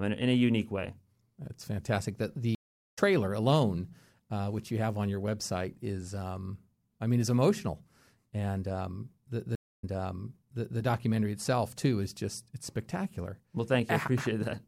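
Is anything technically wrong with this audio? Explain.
Yes, there are two stream reconnects. At 2.55 to 2.99 s the speech drops out for 420 ms and comes back about a third of a second further on. At 9.55 to 10.79 s a 275 ms gap is followed by a jump back 0.97 s, repeating what was just heard. Each time the link dropped and a fresh decoder picked up mid-stream.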